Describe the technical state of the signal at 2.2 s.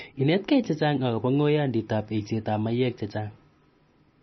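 At 2.2 s the speech is most likely passing through heavy MP3 compression, as it does for the whole clip. Starved of bits, the encoder has cut everything above 5.9 kHz and dropped weak frequency lines, leaving dull, watery, swirling speech with smeared onsets, which points to a very low bitrate near 26 kbps.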